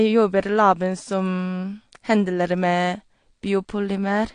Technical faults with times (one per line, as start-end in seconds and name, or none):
0.00-4.34 AAC compression